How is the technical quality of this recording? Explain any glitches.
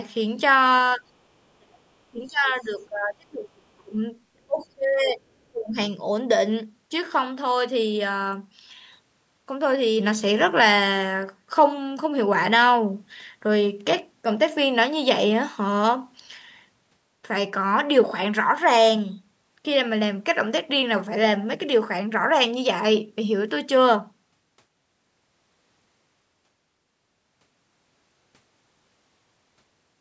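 The first six seconds or so have real trouble, all of it the kind of thing a call's echo canceller does when both ends talk at once. The audio has the narrow call-path sound, with nothing above 8 kHz.

Speech suppressed in double talk: the talker's level drops out at 0.96–1.03 s, 1.57–1.81 s, 2.11–4.0 s, 4.46–5.22 s and 5.5–5.76 s. The first dip is light, about 10 dB. The rest go much deeper, about 25 to 35 dB, so the sound nearly vanishes in chunks. The long stretch from 2.11 to 4.0 s lasts longest. The likely cause is the canceller losing track of which signal was its own talker and which was loudspeaker echo, so it ducked both.

Other side's voice leaking through: right in the middle of one of those dips, at 4.6–4.66 s, a brief scrap of a second voice slips in, very faint at about 35 dB under the main speech. It's likely leftover loudspeaker sound that the echo canceller didn't fully scrub from the mic before the audio went out.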